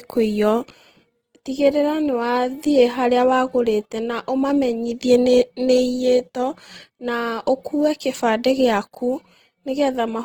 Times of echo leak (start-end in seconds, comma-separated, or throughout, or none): none